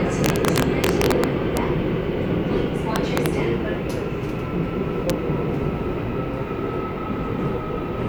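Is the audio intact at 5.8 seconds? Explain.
Yes, the audio is intact at 5.8 seconds, with no audible fault at that moment.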